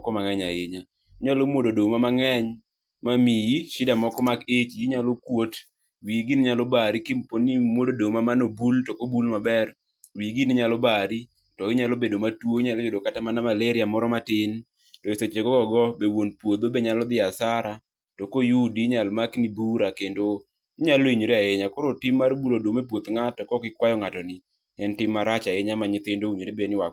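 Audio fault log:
Nothing stood out on listening to the speech here.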